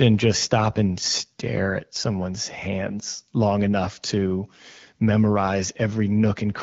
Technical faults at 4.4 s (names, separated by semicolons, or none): none